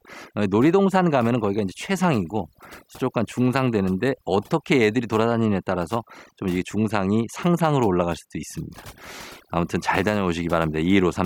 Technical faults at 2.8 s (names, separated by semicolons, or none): overdone noise removal